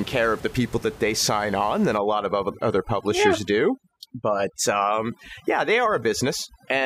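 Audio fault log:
1.98 s to the end, overdone noise removal: from just after "they sign on than", the background stops sitting steadily under the speech and breaks into twinkling, warbling specks, and the quieter parts of the speech thin out with it. That's a noise reducer pushed too hard, shutting individual frequency bands down whenever they fall close to what it thinks the noise is, so low-level speech detail gets cut along with the room noise, which otherwise sits about 19 dB under the speech.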